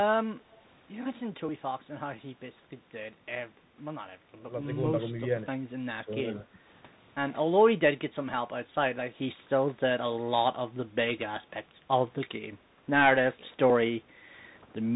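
A speech recording carried over a Bluetooth CVSD headset codec from start to finish. Nothing above 3.8 kHz survives, sibilants sound scratchy, and a granular hiss sits under the voice. At 11.49 to 11.53 s the speech dips by roughly 10 dB for about 40 ms. This is likely speech suppressed in double talk, where an echo canceller turned the talker down.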